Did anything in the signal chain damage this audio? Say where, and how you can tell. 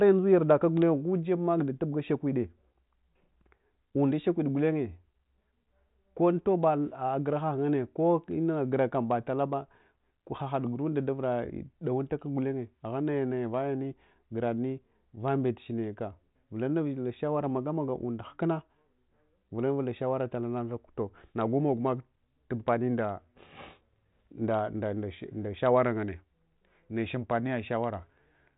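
No, nothing in the chain has hurt this speech; it has simply passed through G.726 ADPCM at 40 kbit/s, which leaves at most a faint trace of coding grit and just closes the band off around 3.8 kHz, as telephone coding does.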